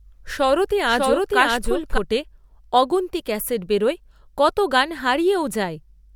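A doubled audio track runs from the start of this speech clip to 1.98 s. A second full-band copy trails the original by roughly 0.7 s at about the same level, with no decay or room colour. It stops abruptly, likely because an edit held two copies out of step.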